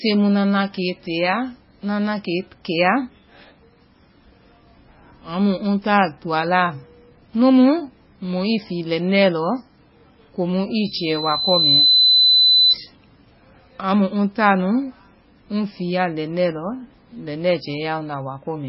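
Throughout the speech, the sound is heavily watery and swirly. Nothing reaches above 5.6 kHz, so the treble is dull, and weak detail flickers in and out. Attacks smear. The likely cause is MP3 compression at a very low bitrate, around 16.6 kbps. Starved of bits, the encoder drops weak frequency lines from frame to frame and cuts the top at a fixed point. On a spectrogram, a hard ceiling sits at 5.6 kHz, with patchy, blinking blocks of energy below it.

From 10.78 s to 12.76 s, just after "komu i", a loudspeaker feedback squeal rises. A microphone was picking up the loudspeaker it fed, and the loop gain exceeded one at 4 kHz, so that frequency reinforced itself. The tone swells over about a second into a squeal, ending about 5 dB above the speech. A spectrogram shows a single bright horizontal line at 4 kHz, strengthening across that span. The waveform's envelope grows correspondingly over the same stretch.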